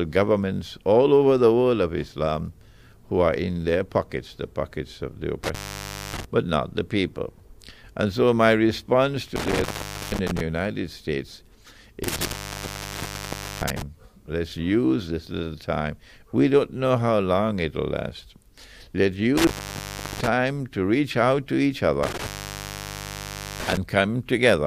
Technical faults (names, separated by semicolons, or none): intermittent contact